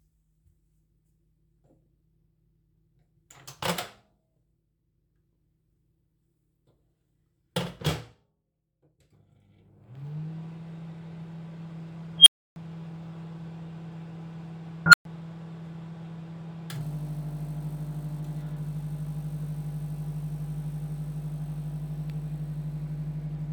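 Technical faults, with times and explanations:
12.18 to 12.56 s and 14.86 to 15.05 s, unstable filter: a recursive filter's feedback runs away. A squeal near 3 kHz, then one near 1.5 kHz, swells to clipping within 81 and 72 ms, overflows, and cuts to silence for 300 and 120 ms until the filter resets.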